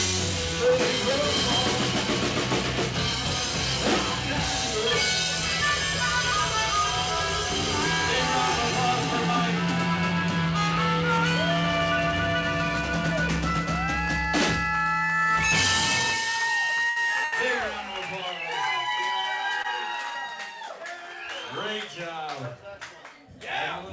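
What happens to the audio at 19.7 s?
A short stall from a late packet, 19.62 to 19.67 s: the jitter buffer ran dry, so about 20 ms of sound is stretched, showing as smeared, repeated spectral frames before playback resumes.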